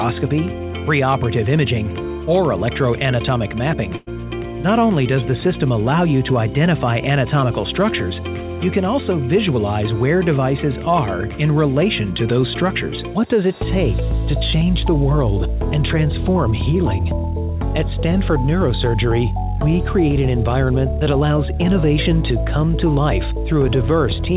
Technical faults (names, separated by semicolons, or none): burst of packet loss